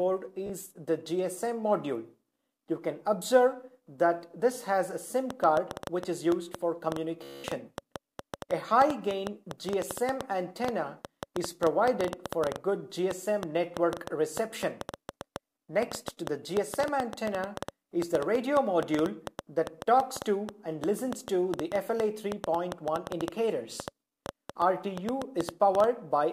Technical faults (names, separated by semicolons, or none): Bluetooth stutter; train of clicks